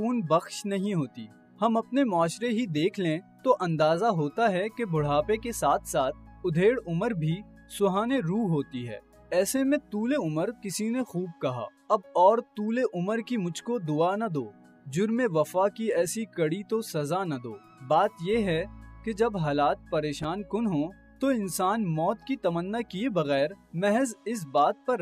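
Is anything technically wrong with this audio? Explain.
Yes. From 20.17 to 20.25 s there is loose connector crackle: a worn contact making and breaking chops the signal, producing a short, irregular scratching burst.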